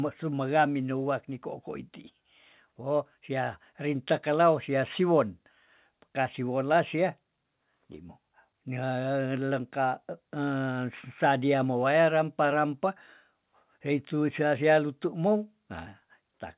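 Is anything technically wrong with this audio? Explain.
No, nothing is technically wrong with this audio.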